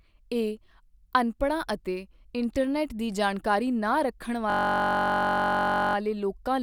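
From 4.50 s to 5.95 s, a system hang loop: the host stalled while playback kept cycling one 21.33 ms stretch of the ring buffer, repeated 68 times. At a 46.9 Hz loop rate this produces a steady buzz, consistent with a 1024-sample buffer.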